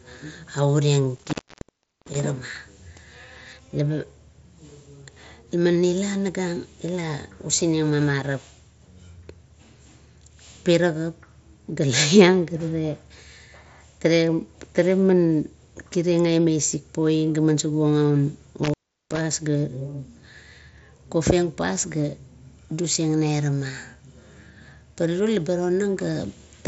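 Speech over a wideband Bluetooth headset link (mSBC, bandwidth capped near 8 kHz) has two intermittent-contact cutouts, at 1.16–2.20 s (open about 0.73 s) and 18.63–19.21 s (about 0.37 s). Crackle at the edges and faint hiss in the gaps show a loose connection rather than clean digital dropouts.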